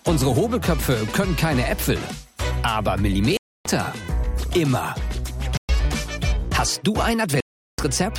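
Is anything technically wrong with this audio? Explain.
Yes. Three dropouts, likely Bluetooth stalls, cut the sound to silence at 3.37 to 3.66 s, 5.57 to 5.69 s and 7.40 to 7.79 s, lasting 284, 118 and 380 ms. Delayed packets emptied the receiver's buffer, pausing playback until data arrived.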